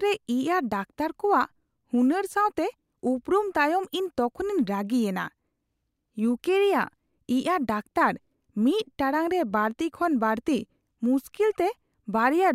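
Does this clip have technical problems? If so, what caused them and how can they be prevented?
No, nothing in this speech clip points to a technical problem, so there's nothing here that needs preventing.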